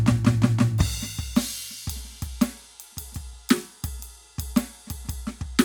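No technical faults are audible.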